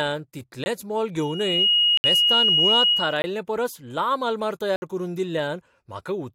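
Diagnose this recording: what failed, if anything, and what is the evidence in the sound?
Four blocks of digital silence, a driver or buffer stage missing its deadline: hard-edged dropouts at 0.64–0.66 s, 1.97–2.04 s, 3.22–3.24 s (just before "परस लांब आलमार") and 4.76–4.82 s.

A loudspeaker feedback squeal from an acoustic loop between mic and speaker: a 2.9 kHz tone swells over roughly 0.4 s from 1.19 s, sits about 10 dB above the speech, and stops at 3.36 s.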